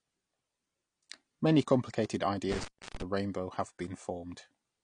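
AAC compression affects the whole speech recording. Nothing remains above 9.9 kHz, and the damage is plainly audible as a dull, smeared tone with a fizzy, warbling edge on sibilants, likely from AAC-LC encoding at a low bitrate near 32 kbps. At that rate the encoder discards the top band and starves the rest of bits. An intermittent contact occurs between 2.52 and 3.02 s, where the signal drops out for about 310 ms with crackle at each edge, as a loose plug or cable briefly breaks and then remakes the connection.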